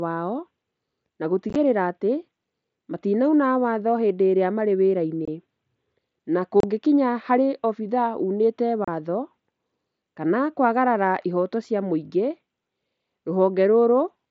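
Unconcealed Bluetooth headset packet loss: voice packets between headset and phone went missing and silence or an idle pattern filled the gaps, with nothing covering them. At 1.50 to 1.56 s, about 30 ms is lost in bursts of up to 15 ms. Further holes fall at 5.25 to 5.28, 6.60 to 6.64 and 8.85 to 8.88 s. Each leaves an abrupt, possibly clicking dropout in the speech, which is carried over the wideband mSBC link.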